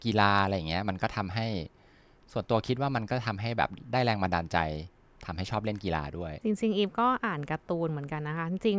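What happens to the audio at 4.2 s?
At 4.2 s the speech carries on cleanly, with no dropout, click, distortion or other fault.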